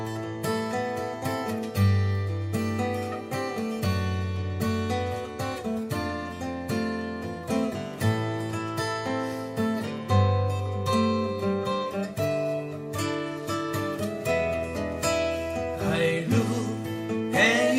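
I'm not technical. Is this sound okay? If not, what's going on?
Yes, this sound is fine, with nothing going wrong anywhere in it.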